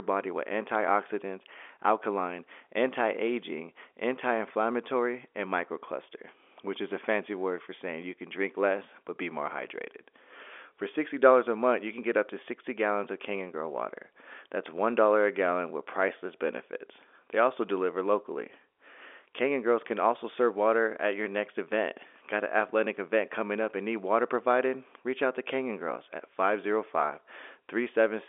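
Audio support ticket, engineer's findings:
Telephone-band speech over G.711 telephone coding, audio limited to about 300 Hz to 3.5 kHz with nothing above 4 kHz, as expected for a standard fixed-line path; no faults found.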